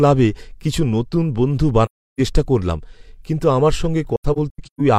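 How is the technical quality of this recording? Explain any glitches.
The speech has two muted gaps from AAC frame loss with muting. At 1.85 to 2.20 s, after "কিছু নতুন বন্ধু", the sound fades out and returns for "চেষ্টা করলাম কিন্তু আমার". That is a silence of about 0.34 s, consistent with eight lost frames. From 4.16 to 4.81 s, after "চেষ্টা করলাম কিন্তু আমার", similar dropouts are spread over 0.64 s. The longest lasts about 150 ms. The decoder zeroed the missing frames, and the overlapping windows give each hole soft edges.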